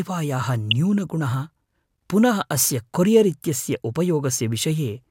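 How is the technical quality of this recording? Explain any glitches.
One glitch mars the speech. At 0.71 s a corrupt frame is decoded: damaged bits in a couple of compressed frames mislead the decoder into placing energy at wrong frequencies, giving a brief, loud glitch. Unlike a dropout, foreign sound replaces the original.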